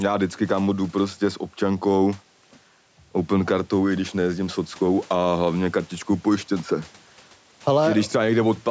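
Right from the start and all the way through, there's gain pumping on this speech. The level seems to be set far too hot for the mic, likely with a fast limiter clamping down each time the talker gets loud. The gain swings by something like 5 dB, so the dynamics feel squashed. The faint room noise sits about 36 dB under the speech.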